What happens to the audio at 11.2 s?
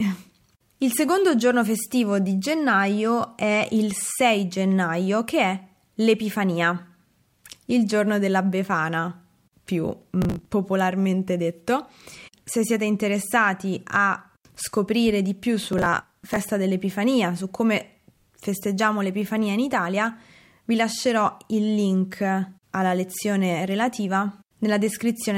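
Nothing goes wrong at 11.2 s: the speech there carries on intact, with no dropout, click or distortion.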